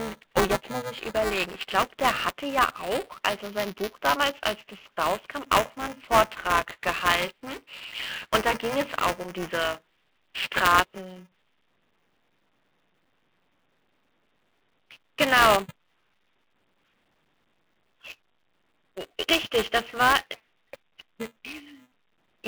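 Speech heard over a telephone-band line, cut off above 3.4 kHz, carries buffer tearing from start to finish: a robotic 375 Hz buzz, which fits a 128-sample buffer. Roughly a tenth of each period replays audio about 10 ms old, so the waveform shows hard splices every cycle, and the spectrogram shows harmonic lines stacked at 375 Hz spacing wherever speech is present.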